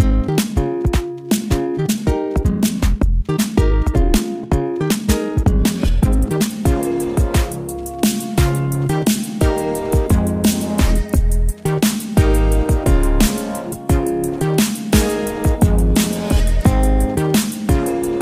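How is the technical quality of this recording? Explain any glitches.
There's one clear glitch at the start. From 0.0 to 6.52 s there's a time-stretched section: the audio runs about 1.83 times too fast, yet the pitch doesn't rise. It's likely software squeezing that stretch to fit a length by dropping short slices, which leaves it rushed until the pace drops abruptly back to normal.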